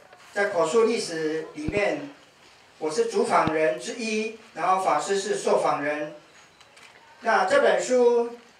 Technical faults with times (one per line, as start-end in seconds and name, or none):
1.68-1.79 loud pop
3.47-3.50 loud pop